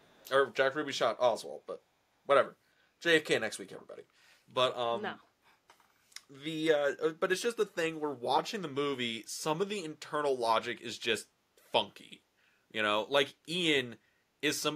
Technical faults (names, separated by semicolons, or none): echo leak